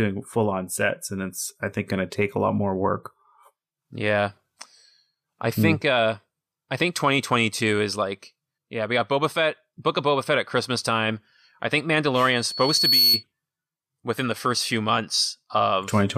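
Right after "time I think", at about 12.31 s, you get a loudspeaker feedback squeal. A tone at 4.4 kHz creeps in and swells over roughly three quarters of a second until it sits a few dB above the speech. It hangs there until it cuts out at 13.24 s. What's happening is the mic is hearing its own loudspeaker, and at that one frequency the loop gain has gone past unity, so the tone just keeps feeding itself.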